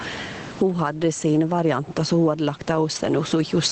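From the start and all through the speech, the level moves by roughly 15 dB, so loud and soft passages sit close together and the speech sounds squashed. This is gain pumping, likely from the input gain being set far too high and a fast limiter or compressor clamping down each time the speech peaks.

From 1.31 to 1.37 s, a brief stretch turns rougher and grainier without any gap. This is a lost packet rebuilt from error correction. About 40 ms went missing, which fits two lost packets, and the decoder filled the hole with the low-bitrate copies that the following packets carried. Those copies are coarser than the normal Opus stream, whose top end stops around 8 kHz, so the join can be heard as a short patch of noisier texture.

From 2.91 to 3.13 s, the same roughness returns for about 120 ms, long enough to hear as a rough, noisy stretch. This is again a lost packet rebuilt from error correction, consistent with a run of about six separate losses, each covered by its low-bitrate copy.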